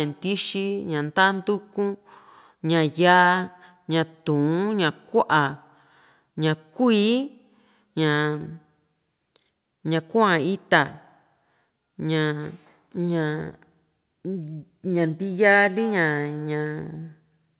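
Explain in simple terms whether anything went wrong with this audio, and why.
Nothing went wrong: the speech came through an ordinary internet call connection, and the lack of anything above 4 kHz is just the normal limit of a phone-quality line, which fits the standard G.711 telephone codec, rather than a fault.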